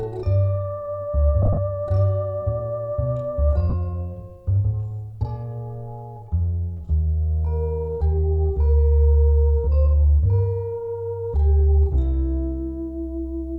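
From 1.42 to 1.58 s, and again at 3.70 to 3.74 s, lost LE Audio frames are concealed with a noisy smear of the preceding spectrum rather than silence. The first loss is scattered, with the longest run roughly 30 ms, and the second loses 37.5 ms.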